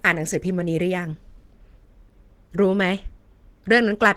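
From start to finish the speech carries plainly audible Opus compression, most likely from a low-rate encode in the codec's hybrid mode, which fits something around 16 kbps. Hybrid mode codes the lower band with the speech-oriented SILK layer and patches the top with CELT, so the voice takes on a muffled, hoarse, grainy quality. The bandwidth stays wide, with content reaching about 20.2 kHz, but that upper region sounds rough rather than clean.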